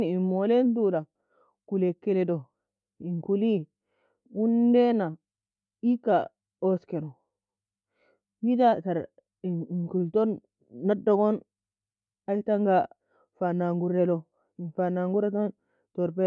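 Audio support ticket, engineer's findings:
Listened to the whole speech recording and found nothing to flag, so no findings to log on this ticket.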